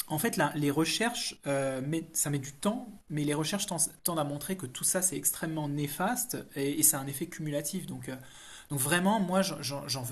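Nothing technical gets in the way of this speech recording; there's no fault to point to anywhere along it.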